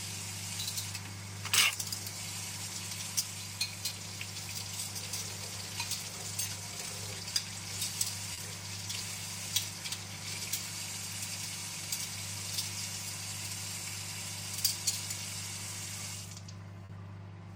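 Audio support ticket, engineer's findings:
Short concealed packet loss at 8.33–8.39 s and 16.85–16.91 s. Network/receive path: about 40 ms of stream missing each time, data late to decoder or lost. Decoder concealment extends the preceding sound for that 40 ms, then crossfades back into the real signal. Heard as a brief smear or wobble at each point, where the true audio is replaced by a short synthetic continuation and its blend back in.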